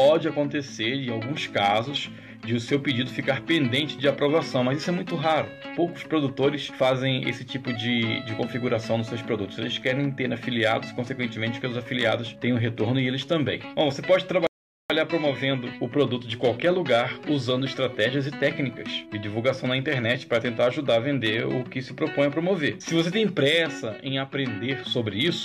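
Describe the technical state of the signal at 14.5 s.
A rebuffering stall runs from 14.47 to 14.90 s. The player exhausted its downloaded audio and halted until more data arrived, so the sound drops to silence for about 0.43 s, then picks up exactly where it stopped, with nothing missing but time added.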